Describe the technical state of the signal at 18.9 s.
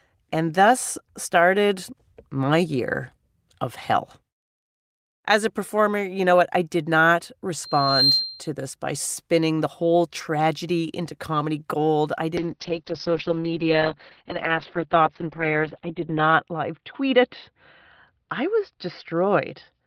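Muffled, rough and watery speech, with the top end gone above 4 kHz. It is a call bitrate drop lasting from 12.38 s, just after "into comedy gold I", to the end. The encoder fell from 32 to 7 kbps, coding coarsely and narrowing its bandwidth.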